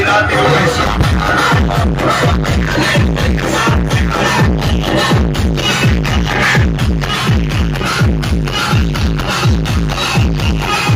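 Nothing here calls for comment, since the audio runs its whole course without a single technical fault turning up anywhere along the way.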